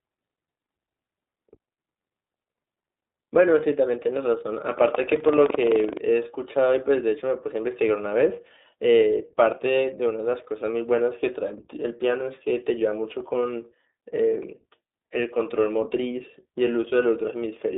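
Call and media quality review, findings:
iLBC codec, whole clip: narrowband, slightly rough, synthetic speech; plainly audible coding damage. Spectrogram shows a hard ceiling near 3.8 kHz, energy confined to roughly 250 Hz to 3.7 kHz, nothing above. Mechanism: each 20 ms frame's excitation coded independently. Texture fits the 15.2 kbps mode.

Buffer tearing, 4.69 to 5.99 s: robotic 23.4 Hz buzz, present only with signal. Writer and reader cross inside each period of what fits a 2048-sample buffer. A small slice of each period, around 7%, repeats audio from about 150 ms earlier. Waveform: regular hard discontinuities at both splice edges. Spectrogram: vertical broadband clicks repeating at 23.4 Hz.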